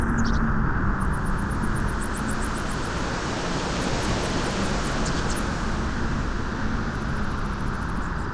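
Listening to this recording of everyday sounds, nothing stood out as a technical problem.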